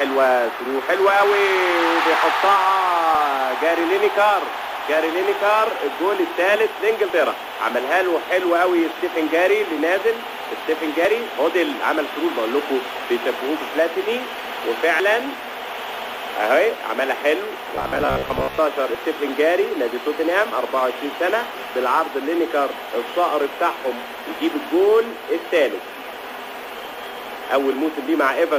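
Short skips break the audio at 3.15, 7.10, 11.05, 15.00, 18.95, 22.90 and 26.85 s, each dropping about 50 ms and joining the two sides with no gap. The steady spacing of about 4 s suggests audio missing between chunks, likely from a recorder or processor losing a slice at each chunk handover. From 17.76 to 18.58 s the sound turns into a rigid metallic buzz pinned near 66.7 Hz, which fits a repeated short buffer of about 15 ms. This robotic sound from repeated short buffers likely comes from new audio arriving too seldom, so the last buffer was replayed in place of roughly half the real material.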